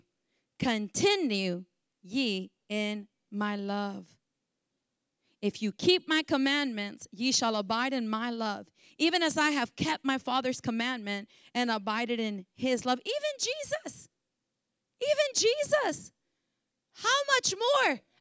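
Speech recording with no audible technical faults.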